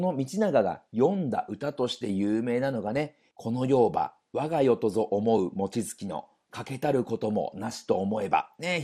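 MP2 compression throughout this speech clip: the sound is dull with a gurgling, granular edge, likely from an MPEG Layer II encoder starved of bits, which fits around 80 kbps, switching off upper bands.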